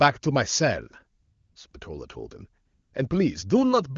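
AMR comfort noise replaces the real background at 1.21–1.55 s, 1.71–1.73 s, 1.79–1.81 s and 2.65–2.93 s. The sender stopped transmitting speech frames, and the receiver filled each gap with smooth synthetic hiss. On a spectrogram these spans appear as flat, textureless noise bands with abrupt edges.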